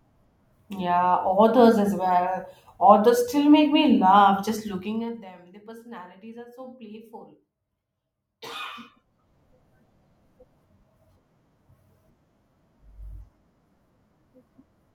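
From 4.68 to 5.32 s, just after "make me laugh just", the speech drops in level with audible zipper noise. Instead of a smooth fade, the gain falls in coarse 1 dB steps at roughly 30 steps per second, around 20 dB in total. Each unsmoothed jump leaves a small discontinuity, so a fast ticking rides on the voice while it fades. On a waveform the envelope descends as a staircase, and a spectrogram shows faint vertical broadband lines at each step.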